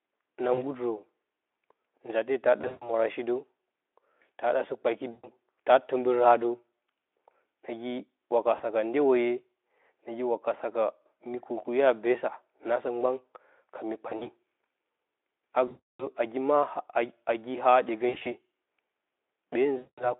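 VoIP packet loss concealed by the speech codec strikes eight times: at 0.53, 2.62, 5.11, 8.55, 14.09, 15.67, 18.09 and 19.77 s. Each gap lasts roughly 40 to 320 ms. The longest is near 15.7 s. When packets go missing, the Speex decoder, carrying a narrow telephone band, repeats its last pitch and filter at falling gain. The sound smears into a fading buzz, and it stays weak briefly after packets resume.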